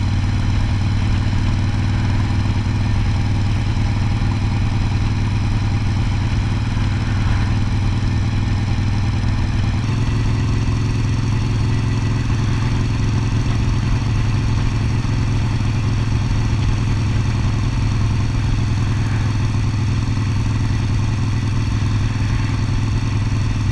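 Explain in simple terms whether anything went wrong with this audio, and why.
For the first 9.8 seconds, the sound plays slightly slow and low, about 8% slower and roughly one and a half semitones deeper. This is a wrong sample rate: the audio is played back slower than it was recorded, which fits 24 kHz material played at 22 kHz.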